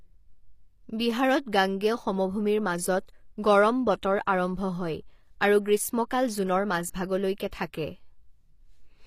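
From start to finish, the treble of the speech sounds bright but synthetic: s sounds come out gritty and lispy, with a metallic sheen, and nothing reaches above about 15.5 kHz. The likely cause is HE-AAC compression, consistent with HE-AAC v2 at a low bitrate near 24 kbps. Only the lower band is actually coded, and the upper band is rebuilt from copied lower harmonics under a coarse envelope, so the rebuilt treble never quite lines up with the real sound.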